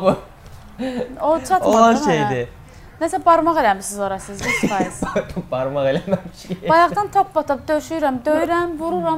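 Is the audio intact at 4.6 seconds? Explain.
Yes, at 4.6 seconds the audio runs on cleanly, with no dropout, click, distortion or other fault to be heard.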